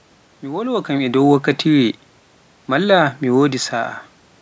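Nothing stood out on listening to this speech recording.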